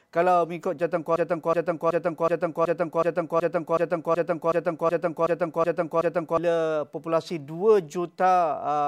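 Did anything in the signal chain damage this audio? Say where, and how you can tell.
Yes: a broken-record loop from 1.16 to 6.38 s. A 0.37 s fragment repeats exactly, back to back, 14 times, and the audio due in that span never arrives. This points to the playback or streaming buffer, likely stalled and re-sending the last fragment it held.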